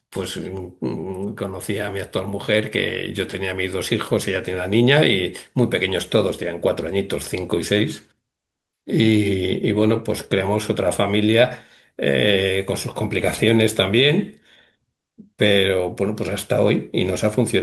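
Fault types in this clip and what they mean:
No fault types are present in this clip.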